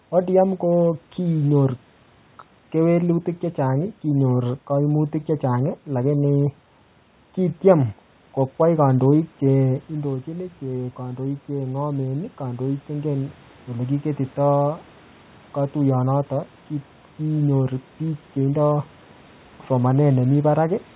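A speech recording in which, from 9.88 to 14.91 s, voice and room noise swell up together by about 8 dB. That is automatic gain rising: after the talker moved away around 9.5 s and the input dropped about 10 dB, the gain control slowly compensated, lifting the background along with the voice. All of this sits within a band that stops at 4 kHz, consistent with a G.711 mu-law call path.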